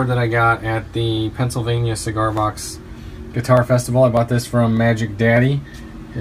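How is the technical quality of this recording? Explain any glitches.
Regular clicks mar the recording. From 0.57 s to 5.97 s, a click or pop recurs every 0.6 s, about ten in all. These are clock drift buffer slips, likely from two devices on mismatched clocks. The buffer drifts until a small block of samples is dropped or repeated.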